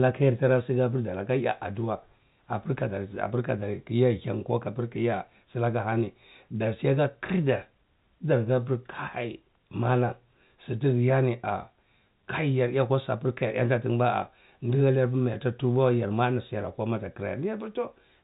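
No technical faults can be heard in this speech, which comes through the band-limited G.711 telephone path with nothing above about 3.8 kHz.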